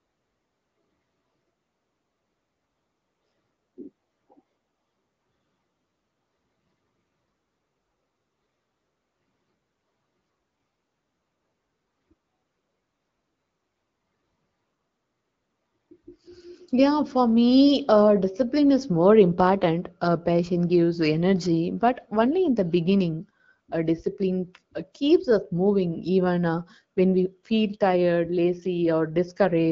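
Nothing stood out on listening to this speech clip, which comes across as ordinary wideband HD Voice audio.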